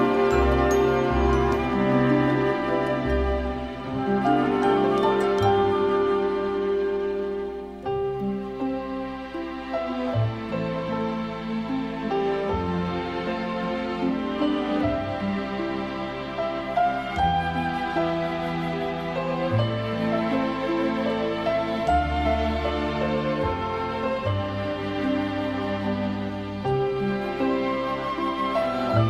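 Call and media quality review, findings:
No faults found on review; nothing to report.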